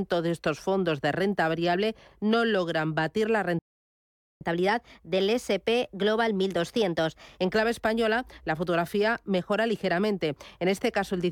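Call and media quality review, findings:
Playback stall, 3.59 to 4.41 s, right after "no logran batir la": speech cuts out for about 820 ms, likely the player starving for data or its thread getting blocked.

Catch-up at higher speed, 4.41 to 7.41 s: the player resamples its backlog at 1.1x, so the speech runs fast and roughly a semitone and a half sharp, then settles back to normal.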